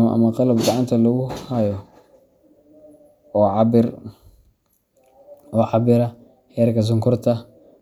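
No technical faults are audible.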